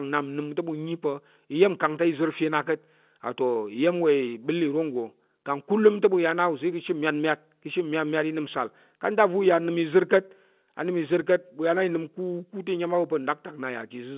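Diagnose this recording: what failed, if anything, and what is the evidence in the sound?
Nothing failed; no fault is audible anywhere.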